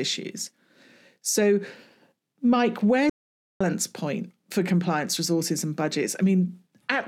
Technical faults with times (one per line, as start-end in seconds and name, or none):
3.10-3.60 audio dropout to silence